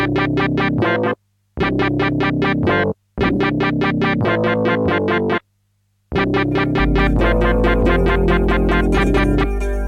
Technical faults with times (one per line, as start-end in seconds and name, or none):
6.80-9.88 mains hum